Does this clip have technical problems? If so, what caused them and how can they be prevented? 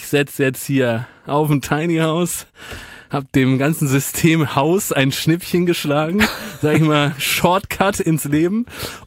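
No, nothing stood out as a technical problem on listening, so there is nothing here that calls for prevention.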